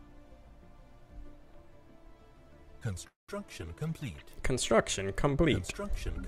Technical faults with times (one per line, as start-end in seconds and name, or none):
3.07-3.31 call audio freeze